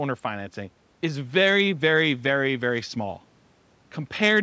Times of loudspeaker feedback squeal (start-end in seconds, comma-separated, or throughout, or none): none